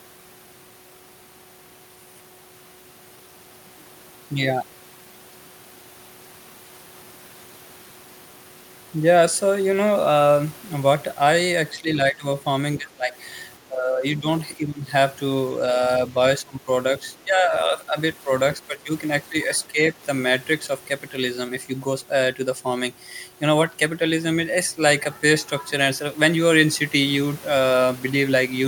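Speech suppressed in double talk occurs at 11.8–12.25, 12.78–13.16, 13.63–14.88, 16.39–16.68, 17.17–18.9, 19.29–19.35 and 19.67–19.95 s. The speech dips by about 10 to 20 dB and breaks up in pieces. The likely cause is an echo canceller that mistook overlapping talk for echo and turned it down.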